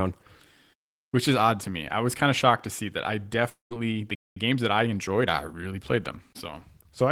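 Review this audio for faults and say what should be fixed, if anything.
Long network dropout at 3.49 to 3.73 s, just after "to see that I". The final sound smears into a fading buzz, then goes near-silent. Speech resumes with about 220 ms missing, likely because packets were lost in transit. Adding forward error correction or redundancy would help prevent this.

Playback stall at 4.15 to 4.37 s. The speech halts mid-flow for about 211 ms, then picks up again. That is likely a player buffer running dry or a blocked audio thread. A deeper playout buffer and a real-time audio thread would prevent this.

Time-compressed catch-up from 4.37 to 6.47 s. Right after the stall, the player works off its backlog by trimming and cross-fading small slices. The speech runs about 1.1 times fast at normal pitch. Smaller stalls, or a gentler catch-up rate, would prevent this.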